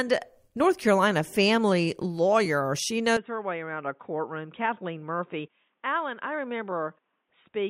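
At 3.17 s the speech abruptly turns dull and boxy and stays that way to the end, with no gap at the transition. The likely cause is the input switched to a poorer device mid-recording. The level falls by roughly 10 dB, and a faint new noise floor appears about 50 dB below the speech. On a spectrogram, everything above 3.8 kHz vanishes at that instant, leaving a hard ceiling. On the waveform, the envelope visibly shrinks.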